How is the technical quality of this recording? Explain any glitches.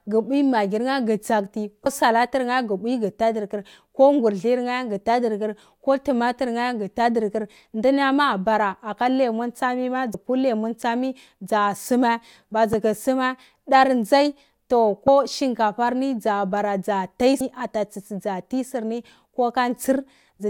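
The speech is marred by damaged data in a compressed stream, heard five times: 1.83–1.86 s, 10.11–10.14 s after "abara aka lemon tsumi", 12.73 s, 15.05–15.08 s just before "shinkafar ni dzabara dza", and 17.37–17.41 s after "ni dzabara dza tai". Each lasts about 30 ms or less. Corrupted bytes confuse the decoder. It loses frame sync and hunts for the next valid header. The result is a brief chirp or blip.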